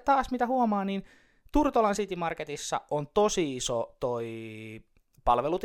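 Listening through the speech in the clip, nothing stood out as a technical problem at any point.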